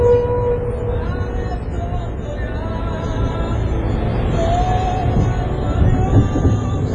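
From start to finish the audio has a washy, ringing quality, with a hiss that swells and fades along with the sound, and nothing at all above about 10.6 kHz. That's heavy damage, most likely from WMA compression at a low rate, around what you'd expect near 24 kbps. The transform encoder smears its quantisation noise across long blocks so it spreads around each event, and it throws away the weaker detail and the top end entirely.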